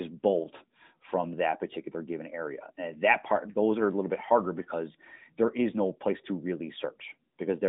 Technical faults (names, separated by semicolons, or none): none